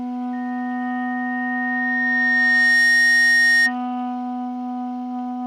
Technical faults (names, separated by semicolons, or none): loudspeaker feedback squeal